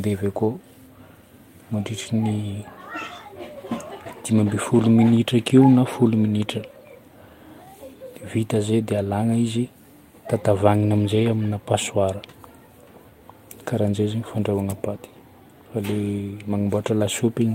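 At 0.37 to 0.39 s the speech briefly turns rough and noisy, with no gap. It is a lost packet rebuilt from error correction. About 20 ms was replayed from a low-bitrate backup copy carried in the next packet, which fits a single lost packet. The same thing happens at 11.15 to 11.29 s. This time about 80 ms of audio comes out coarser, which fits four lost packets rebuilt the same way.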